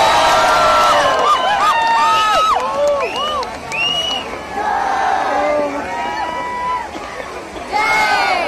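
No technical faults can be heard anywhere in the audio, and the signal holds steady for its entire duration.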